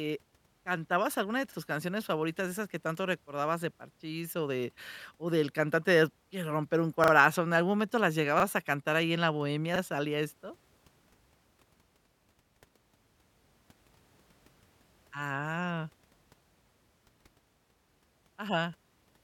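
On four occasions, new audio did not reach the playback device in time, so it played its last buffer again. This is a repeated buffer fault in a speech recording. Each repeat lasts about 40 ms, which fits a 40 ms buffer, and sounds like a short stutter with a hard join. The stutters come at 1.52 s after "alguna de", 7.04 to 7.12 s after "de quiero romper un" (repeated twice), 8.4 s after "algún momento las", and 9.76 s. No speech seems lost. It just resumes slightly late.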